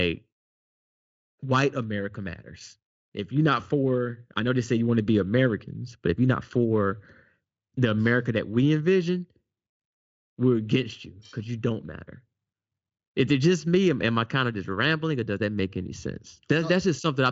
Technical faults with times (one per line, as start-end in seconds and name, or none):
none